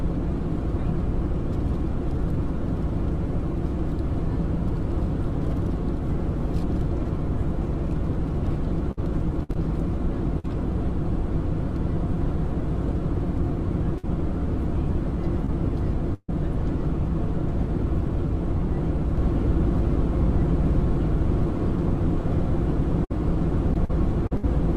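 Packet loss runs through the audio in several forms. Repeated packet loss (robotic sound) appears from 8.91 to 9.57 s with four gaps and from 23.74 to 24.45 s with five, the longest about 60 ms, and roughly a fifth of each stretch is patched. It sounds choppy, with pieces missing. A spectrogram shows smeared, frozen harmonic slices alternating with real content. Bursts of packet loss occur at 10.39 to 10.46 s, 13.98 to 14.05 s, 16.14 to 16.30 s and 23.04 to 23.12 s. In each, the receiver stretched the last sound into a held buzz or hiss that fades, then jumped ahead past the lost section. The waveform shows a decaying, repetitive envelope, and the 16.14 s burst has its longest patch and ends in about 30 ms of silence. A short concealed packet loss at 15.45 to 15.50 s leaves a brief smear where roughly 20 ms was lost. It appears as a faint, blurred column on the spectrogram. From 19.17 s to the end there is a doubled audio track: a full-band copy at about equal level trails by about 1.5 s, likely from a second, slower capture path. 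It enters abruptly with no reverberant tail, and the spectrogram shows the same patterns repeated 1.5 s apart.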